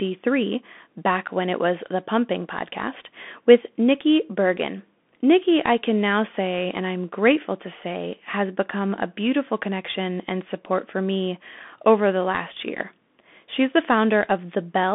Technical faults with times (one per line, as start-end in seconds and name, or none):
0.00-14.95 Bluetooth CVSD headset codec